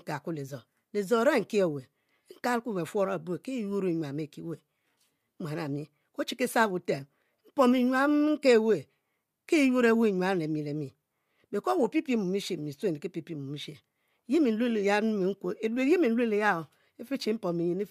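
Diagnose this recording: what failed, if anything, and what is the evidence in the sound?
Nothing in the speech recording points to a failure at any stage of the chain: the signal runs continuously at a steady level, without dropouts, clicks, distortion or spectral damage.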